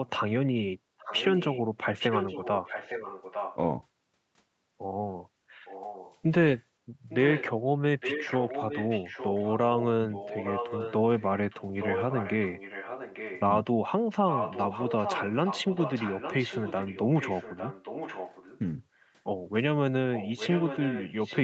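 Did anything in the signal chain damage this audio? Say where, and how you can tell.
Yes. A delayed copy of the speech, trailing by about 0.86 s and typically some 10 dB below it, surfaces at 0.98–1.59, 1.99–3.56, 5.65–6.16, 7.09–7.46, 8.0–13.43, 14.28–18.59, 19.01–19.12 and 20.14 s to the end. This echo leak likely comes from call processing: a far-end echo canceller failed to remove its loudspeaker's output from the microphone signal.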